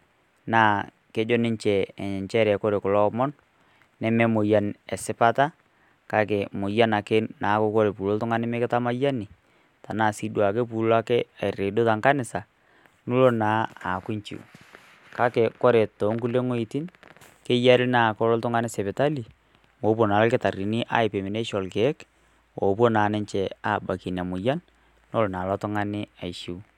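Speech recording with no audible technical faults anywhere in the clip.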